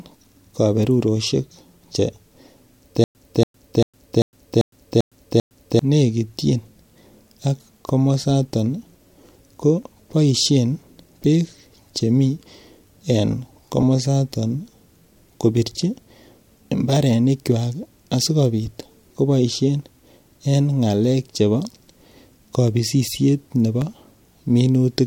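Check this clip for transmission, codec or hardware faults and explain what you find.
One fault is present: stutter with silent gaps, from 3.04 to 5.79 s. A 283 ms fragment of speech repeats seven times, with 110 ms of digital silence between repeats. The likely cause is a stalled stream replaying its last buffer on each retry. The speech meant for that stretch is lost.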